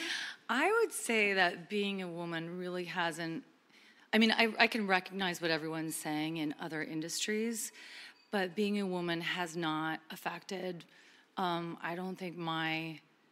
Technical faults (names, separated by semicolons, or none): none